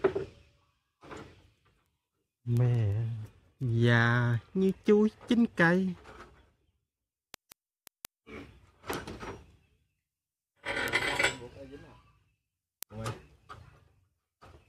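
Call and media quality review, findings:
Word clock ticks. Digital link read by a receiver on its own unlocked clock, mismatch around 100 ppm. Clocks slip about every 0.2 s, one sample dropped or repeated each slip. Result: sharp ticks of uneven strength at a steady rate, roughly 70 in all, 0.27 s to 14.6 s.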